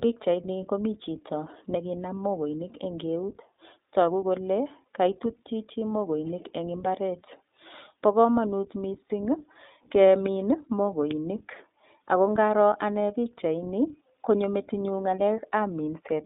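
Speech that sounds narrow and slightly rough and synthetic throughout, with nothing above about 3.7 kHz or below about 250 Hz. The cause is the iLBC codec, a narrowband VoIP coder. The plainly audible coarseness fits its 15.2 kbps mode with 20 ms frames, each frame's excitation coded on its own. Two lost iLBC frames appear as brief held, faintly buzzy vowel-like fills: at 7.26 to 7.30 s, just after "chichi mokoinik eng imbaret", and at 9.09 to 9.11 s, after "bo komonut". Each fits a single missing 20 ms packet that the decoder concealed by repeating the last pitch cycle mixed with noise. Because iLBC frames stand alone, the speech recovers immediately afterwards.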